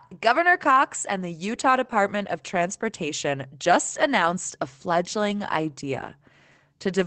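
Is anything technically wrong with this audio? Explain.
Yes. From 5.29 to 5.39 s there's a lost packet rebuilt from error correction. About 60 ms of audio, which fits three separate lost packets, was replaced by low-bitrate copies carried in the following packets. The decoder played those copies, so there's no silence, just a brief rough, noisier patch within the Opus call audio's 8 kHz band. On a spectrogram it appears as a short smeared, grainier stretch. The waveform shows no gap.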